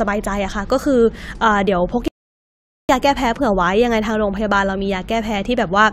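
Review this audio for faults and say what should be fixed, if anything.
A rebuffering stall interrupts the speech at 2.08 s, where playback drops to silence until 2.89 s, then picks up at the exact point it stopped. The player exhausted its downloaded audio and had to wait for more data, so nothing is skipped, but about 0.81 s of dead air is inserted. Prevent it by enlarging the playback buffer or serving a lower-bitrate stream when throughput falls.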